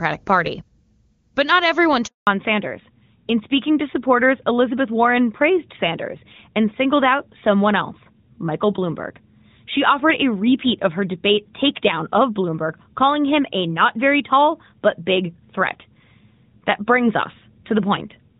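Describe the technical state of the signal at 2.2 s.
At 2.2 s the signal is inside a handover gap running from 2.07 to 2.27 s, 200 ms in total. The call was being moved from one network link to another, and no speech frames reached the decoder during that switch. The speech dies away within a few tens of milliseconds of 2.07 s and the channel stays silent until the new link comes up at 2.27 s. Whatever was said in that window is lost.

When audio resumes at 2.27 s it comes through a fallback to narrowband. The call drops from AMR-WB at 23.85 kbit/s, the HD Voice codec, whose coding is clean before the gap, to AMR-NB at 12.2 kbit/s, and this lasts to the end of the clip. Nothing above 4 kHz passes after the switch, so the voice loses its upper band and sounds duller and rougher than it did before 2.07 s.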